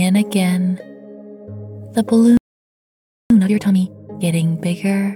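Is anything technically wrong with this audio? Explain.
Yes, the audio has two related faults: a playback stall and then a time-compressed catch-up.

From 2.37 to 3.30 s there is a playback stall. The sound stops mid-flow and the output stays silent for about 0.93 s before it resumes. The likely cause is that the player ran out of buffered data or its thread was blocked. On the waveform this shows as a flat line that cuts in abruptly. On a spectrogram it is an empty vertical band across all frequencies.

From 3.30 to 4.22 s comes a time-compressed catch-up. After the gap, the player works through its backlog at twice normal speed by cutting out small pieces of audio and cross-fading the remainder together. The pitch stays where it should be, but the sound is audibly hurried. On a spectrogram, events in this stretch are packed closer together in time while their frequencies stay unchanged.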